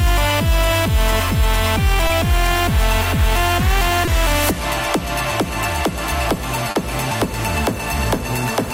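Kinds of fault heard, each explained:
Short concealed packet loss: brief smears or wobbles, where the sound seems stretched for an instant before settling back, at about 2.07 s and 4.05 s (20 ms each) and a longer one at 6.71 s (40 ms). In each gap, audio failed to reach the decoder in time, so the receiver covered the hole by extending the last sound it had, then blended back into the real signal as it returned.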